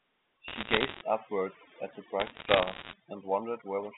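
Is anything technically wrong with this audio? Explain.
Yes. Two faults are audible in this speech recording.

Overdone noise removal runs through the whole clip. The background drops to an unnatural near-silence dotted with twinkling specks. A noise reduction stage was pushed too hard: it cuts individual frequency bands deep, or removes them entirely, whenever they sit close to its noise estimate. The quieter components of the voice fall into that range and get stripped out with the noise.

Bit errors on a digital phone line appear as two bursts of crackle. The first runs from 0.48 to 1.02 s and ends just before "upwards at the". The second runs from 2.2 to 2.93 s and starts right after "upwards at the". Each is a cluster of sharp ticks over otherwise intact speech. On this G.711 A-law line, which is telephone-narrow at about 150 Hz to 3.6 kHz, each flipped bit corrupts a single sample. 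Flips that land on a high-order bit, or on the sign bit of a loud sample, produce the loudest ticks. The error rate works out to roughly one to one and a half percent.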